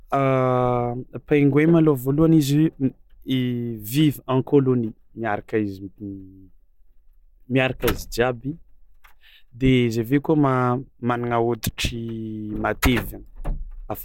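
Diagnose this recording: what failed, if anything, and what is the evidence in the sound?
Nothing failed; no fault is audible anywhere in the recording.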